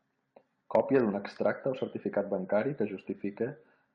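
Nothing stood out on listening to this speech recording.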